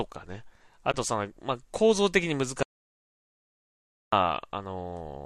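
At 0.92 s, a stretch of coded audio failed to reach the decoder, and instead of inventing a replacement it zeroed the spectrum for the missing span, an AAC frame loss with muting. The lost portion comes to about 20 ms, which fits two short low-delay frames going missing, consistent with the light low-delay AAC compression on this speech. Because the overlapping windows still blend into the neighbouring frames, the speech fades out and back in by 0.94 s, leaving a brief, soft-edged hole.

From 2.63 s to 4.13 s, the input feeding the recorder most likely disappeared through a dropped connection, an unplugged device or an accidental mute, while the encoder kept writing silence. This audio dropout to silence lasts about 1.5 s. The speech cuts off abruptly mid-flow and the gap is silent, with no room tone or background underneath. When the signal returns at 4.13 s, it resumes just as suddenly, and whatever was said in between is simply missing.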